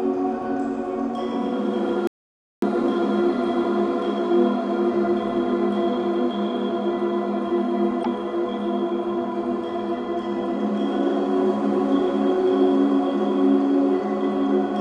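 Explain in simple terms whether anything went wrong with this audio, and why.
Two things go wrong. First, an audio dropout to silence runs from 2.07 to 2.62 s. The sound stops dead for about half a second, with no background noise at all. The input was likely lost briefly, and the recorder kept writing silence.

Second, there is damaged data in a compressed stream at 8.01 to 8.06 s. A short chirp or blip cuts through. Part of the compressed file was corrupted there, so the decoder misread those bytes before finding its place again.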